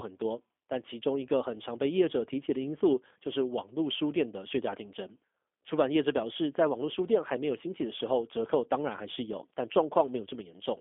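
From start to finish the speech carries G.729 codec damage, consistent with an 8 kbit/s G.729A stream: a filter, pitch predictor and sparse pulses rebuild it, sounding rough and synthetic. A spectrogram shows energy confined to 250 Hz–3.5 kHz, empty above 3.6 kHz.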